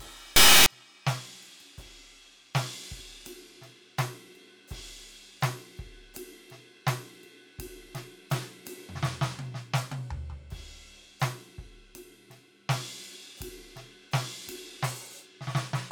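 Integer read as float corrupts this music clip from 0.36 to 0.66 s. For those 0.3 s the audio turns into a harsh, extremely loud buzzing square wave, jumping between zero and the clipping limit. That fits 32-bit integer samples being interpreted as 32-bit floats, which produces near-zero or wildly over-range values.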